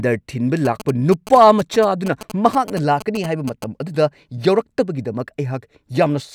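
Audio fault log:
0.65 to 3.64 s, GSM signalling bursts: there's a galloping dit-dit-dit of short 217 Hz buzzes sitting roughly 15 dB under the speech. A nearby 2G phone is doing its signalling chatter, and the audio circuitry is rectifying those radio bursts into audible clicks.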